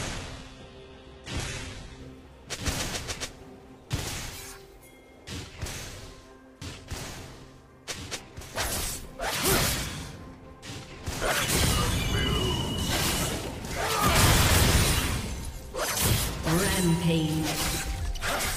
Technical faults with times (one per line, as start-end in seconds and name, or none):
0.00-2.00 adaptive stream starting at a low bitrate